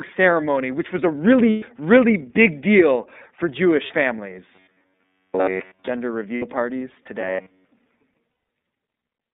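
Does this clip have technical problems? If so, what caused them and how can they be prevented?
Yes. iLBC codec, throughout: narrowband speech at 13.33 kbps in 30 ms frames, passing only about 200 Hz to 3.7 kHz, sounds dull, rough and plainly synthetic. Prevent it by sending speech over a wideband codec such as Opus.

Lost iLBC frames, at 1.50 to 1.63 s, 3.86 to 3.91 s, 6.35 to 6.45 s and 8.30 to 8.48 s: missing packets lasting 120, 30, 60 and 180 ms are concealed by a buzzy, held vowel. The first falls between "ceremony which was a" and "really big deal for". Prevent it with a steadier network path, forward error correction or a larger jitter buffer.

Robotic sound from repeated short buffers, 4.55 to 5.90 s: a rigid 93.8 Hz buzz replaces most of the speech. This is likely caused by a stalled audio feed that kept repeating a buffer of about 10.7 ms. Prevent it by giving the audio thread enough priority and buffer headroom that it never runs dry.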